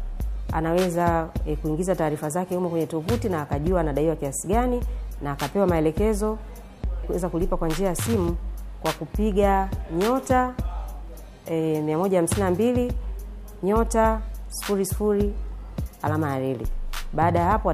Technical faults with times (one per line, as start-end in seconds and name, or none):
none